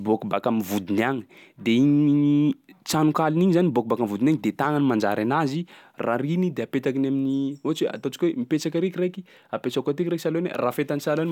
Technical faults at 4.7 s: none

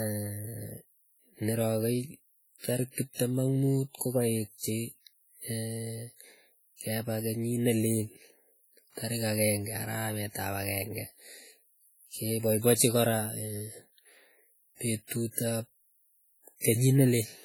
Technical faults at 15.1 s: WMA compression; pre-echo

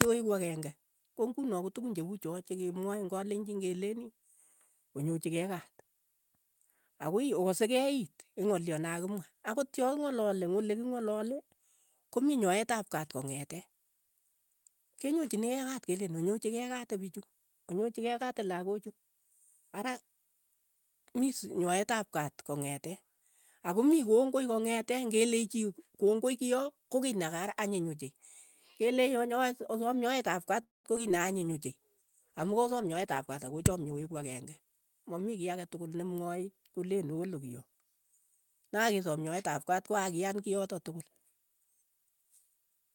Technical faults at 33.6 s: call bitrate drop; jitter buffer speed-up

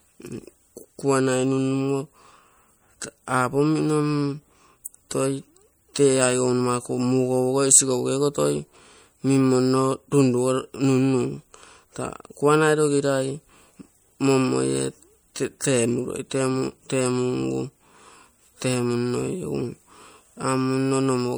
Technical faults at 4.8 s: MP3 compression; pre-echo

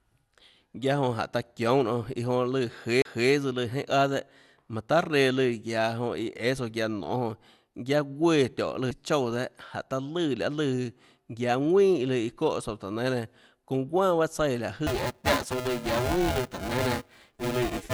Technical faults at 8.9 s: MP2 compression; CD skip

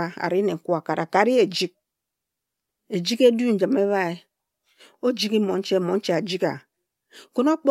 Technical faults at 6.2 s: none

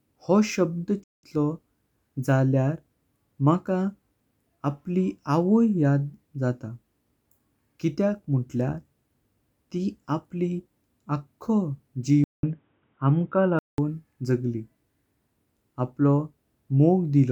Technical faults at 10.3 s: none

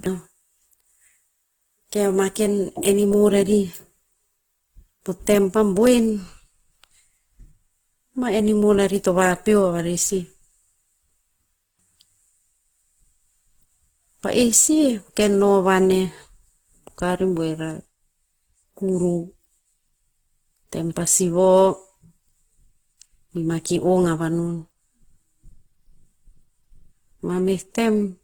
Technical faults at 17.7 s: Opus compression

